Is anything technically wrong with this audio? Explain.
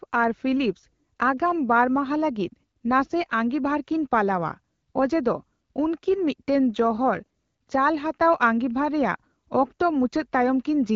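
No, the speech carries the band-limited but clear character of the AMR wideband (HD Voice) codec at around 12.65 kbit/s, and nothing in the signal points to a technical fault.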